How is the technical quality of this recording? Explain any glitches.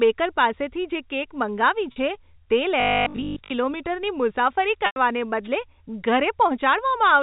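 The recording has three kinds of glitch, heard through narrowband telephone coding (G.711 mu-law) that cuts everything above 4 kHz.

Packet loss with pitch repetition occurs at 1.92 s and 4.86 s. At 1.92 s about 40 ms goes missing, which fits two 20 ms packets, and the receiver loops the last pitch period, giving a brief held, buzzy tone. At 4.86 s about 100 ms is lost, so the repetition fades toward silence before the sound cross-fades back. On a spectrogram, the harmonic lines run flat and frozen and then thin out.

Robotic sound from repeated short buffers runs from 2.80 to 3.52 s. A rigid, metallic 50 Hz buzz appears while the sound loosely tracks its original shape. The likely cause is playback repeating 20 ms chunks, skipping much of the real audio, since 50 Hz is one over 20 ms. The waveform shows near-identical 20 ms cycles, and the spectrogram shows evenly spaced 50 Hz harmonics.

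A wireless microphone noise hit falls at 5.44 to 5.48 s. When the analogue FM radio signal fades, receiver noise surges and produces a short swish of static over the sound. It appears as a brief broadband smear on the spectrogram and a fuzzy burst in the waveform.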